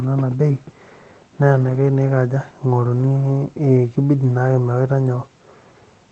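Around 1.61 to 1.75 s and again at 2.95 to 3.09 s there's a short rough, grainy patch, about 80 ms each time, and a briefer one at 4.23 s, around 20 ms. That's a lost packet rebuilt from error correction: the packets went missing, but the next ones carried low-bitrate backup copies, so the decoder played those instead of leaving a gap. The longer patches fit runs of four 20 ms packets, and the last fits a single one.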